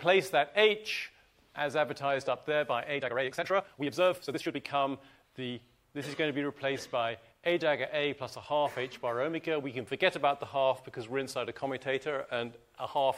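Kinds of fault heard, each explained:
Time-stretched section: from 2.93 to 4.59 s the audio suddenly races ahead, running about 1.88 times faster than the material around it while the pitch stays where it was, so those 1.7 seconds sound rushed before normal pace returns. The likely cause is software compressing that stretch to fit a shorter length, dropping short pieces of the waveform rather than resampling, which shortens the passage without raising its pitch.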